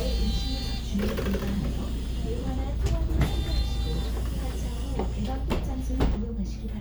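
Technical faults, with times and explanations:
No technical faults can be heard in this clip.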